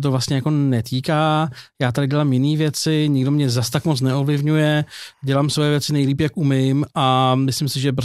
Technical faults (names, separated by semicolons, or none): timecode bleed